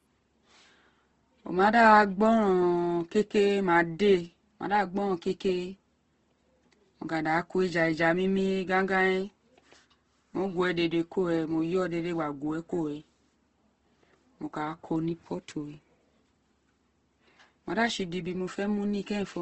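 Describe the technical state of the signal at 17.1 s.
At 17.1 s, as throughout, the speech has nothing above 8.2 kHz and sounds rough and grainy, likely from Opus compression in its music mode at a low bitrate near 16 kbps. Starved bands are filled with noise instead of left empty, so it turns gritty rather than swirling like MP3.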